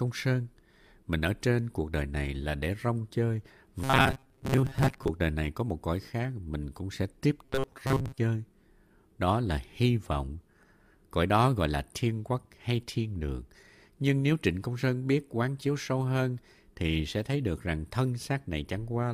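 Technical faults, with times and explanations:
3.84–5.09 s and 7.45–8.18 s: robotic sound from repeated short buffers. A metallic buzz locked at 134 Hz is likely from looping about 7.5 ms while half, then most, of the audio is skipped. Unlike dropouts, there are no gaps.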